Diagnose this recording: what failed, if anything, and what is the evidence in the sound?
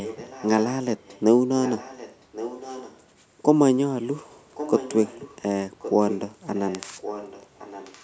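Echo leak at the call-processing stage: a quieter, delayed copy of the speech, likely from an echo canceller failing to remove loudspeaker pickup, trails the speech by about 1.12 s during 0.04–0.65, 1.05–1.21, 1.62–2.99, 4.54–5.42, 5.79–6.37 and 6.55–8.03 s. Unlike room reverberation, which smears into a continuous tail, this is a distinct repeat at one fixed delay.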